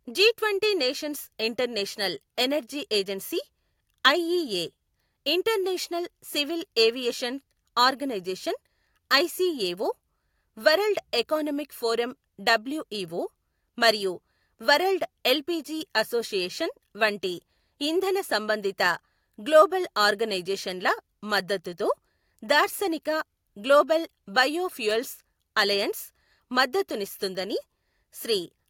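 No technical faults are audible anywhere in this recording.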